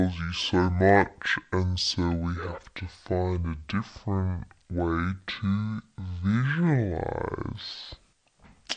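Throughout, a wrong sample rate plays the speech at half speed and an octave lower, which fits 48 kHz audio played at 24 kHz. Pitch and tempo drop together, unlike a pitch shift.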